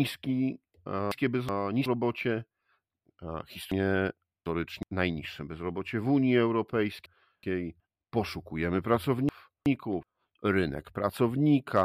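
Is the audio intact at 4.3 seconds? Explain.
No. From 3.72 to 4.83 s the speech has chunks out of order: one block of about 372 ms arrived or was written late and plays two blocks after its proper place. The three hard joins produce a jumbled, garbled moment just before "najniższe bezrobocie w". Unlike a dropout or a stutter, nothing goes silent and nothing repeats. All the audio is present, but it is heard in the wrong sequence.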